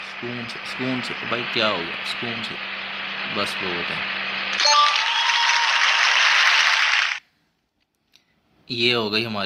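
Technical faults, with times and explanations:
No technical faults can be heard anywhere in this audio.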